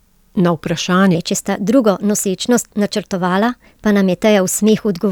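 Throughout, a block size mismatch (truncated) adds a steady buzz at 46.9 Hz. The end of each block is dropped, which fits 1024-sample blocks. The pace stays normal.

From 1.15 s to the end, a section plays at the wrong speed, 1.16 times too fast. Pitch rises about three semitones, likely from fitting to the wrong clock.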